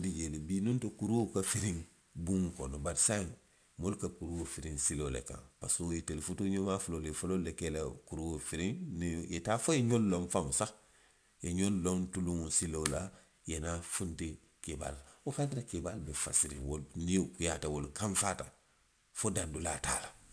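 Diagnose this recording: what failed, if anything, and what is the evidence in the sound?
Aliasing from sample-rate conversion runs throughout. Sibilants turn gritty and metallic, and energy presses hard up to an 11 kHz edge, which fits a drop to about 22 kHz with no anti-alias filter. A clean low-pass would only dull the top; this adds unrelated folded pitches about 20 dB below the speech.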